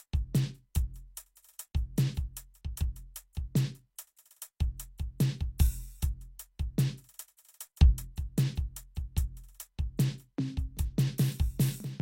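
At 1.35 s, from 4.16 to 4.18 s, and at 7.37 s the music shows pre-echo: the codec spreads quantisation noise across each transform block, so noise from a sharp attack leaks 13 to 20 ms ahead of it as a short hiss, smearing the onset.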